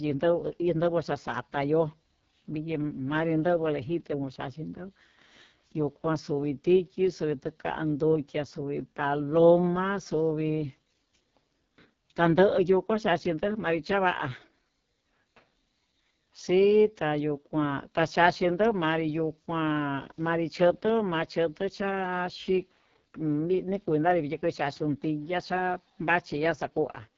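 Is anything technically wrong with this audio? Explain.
Yes. The AMR wideband (HD Voice) codec is at work for the whole clip, at a heavy level of damage. The codec rebuilds speech below 6.4 kHz from a vocal-tract filter driven by sparse pulses, and fills the band up to about 7 kHz with shaped noise rather than real detail. The coarse, rough, raspy texture on the speech points to the codec's lowest rates, which fits 6.6 kbit/s, and nothing is present above 7.5 kHz.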